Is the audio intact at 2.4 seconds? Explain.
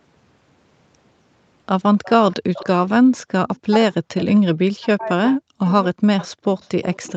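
No. From 2.03 to 2.67 s there's an echo leak: a faint copy of the speech trailing the original by 260 ms, well below the main voice. Likely the far end's loudspeaker reached its microphone and its echo canceller let some through.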